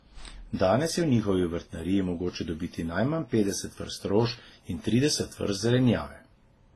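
Throughout, the speech carries mixed smeared and swirly artefacts with nothing above 12 kHz, likely from transcoding between lossy codecs, each pass stacking its damage onto the last.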